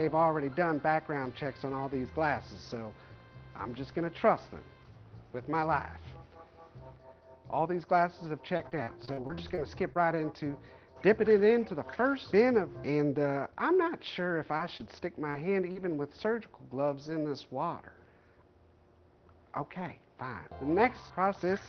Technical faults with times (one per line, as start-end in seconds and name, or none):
8.57-10.17 repeated packet loss (robotic sound)
14.43-15.91 scattered short gaps